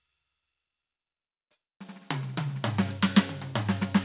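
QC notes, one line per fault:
No faults found in the music. Nothing in the audio calls for a QC note.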